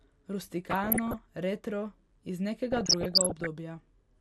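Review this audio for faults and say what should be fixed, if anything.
Throughout the speech the sound is dull and carries a gurgling, granular roughness as upper bands drop in and out. That points to MP2 compression, likely at a low rate around 80 kbps, which starves the sub-bands of bits. Prevent it by encoding at a higher bitrate.

DAB burbling appears from 0.70 to 1.18 s, just before "retro iz", and again from 2.72 to 3.46 s, just after "retro iz". Bit errors of roughly 0.7% and 1% slipped past error correction and corrupted the MP2 audio data, putting short blips of noise into individual sub-bands. Prevent it by improving reception or the antenna.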